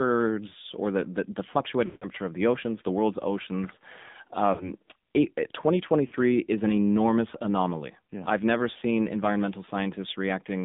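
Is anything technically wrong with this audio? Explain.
Yes, there are two problems, both tied to a mobile call path.

The whole clip has gone through the AMR narrowband mobile codec. The band runs only from about 150 Hz to 3.7 kHz, so everything above the old telephone limit is gone. The coder rebuilds speech from a vocal-tract model excited by a few pulses per subframe, and at this low rate, which fits the 7.4 kbps mode, that damage is plainly audible as a buzzy, synthetic edge on the speech.

There are also lost AMR speech frames in three places. The decoder fills each gap by repeating the last good pitch and filter settings while lowering the gain. The biggest gap runs from 1.86 to 2.09 s, between "or the the the" and "of the oceans the". It lasts 160 ms, which points to a run of about eight frames, and the sound smears and fades out before the speech returns. Shorter gaps at 4.54 to 4.73 s (60 ms) and 6.08 to 6.15 s (40 ms), the last just before "is an enormous anomaly", come across as brief dips or warbles.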